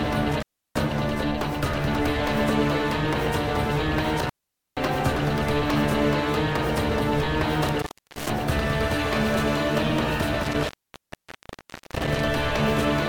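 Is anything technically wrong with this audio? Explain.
Yes. There is intermittent contact at 0.32–0.81 s, 4.18–4.89 s, 7.69–8.30 s and 10.43–12.21 s. A loose cable or plug briefly opens. The sound drops out for about 0.33 s, 0.47 s, 0.34 s and 1.27 s, leaving faint hiss, with crackle at each break.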